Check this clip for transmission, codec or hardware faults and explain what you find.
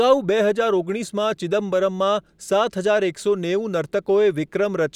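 No transmission, codec or hardware faults can be heard anywhere in the speech; the signal stays continuous and intact throughout.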